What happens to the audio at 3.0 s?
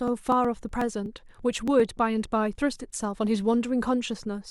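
Nothing goes wrong at 3.0 s: the speech continues intact through that moment, with no dropout, click, distortion or other fault.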